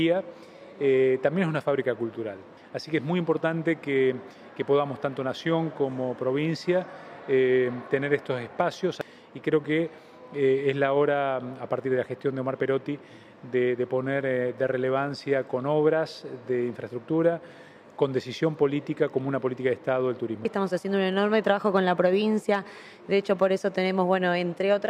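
Nothing in the recording stood out as a technical fault on listening.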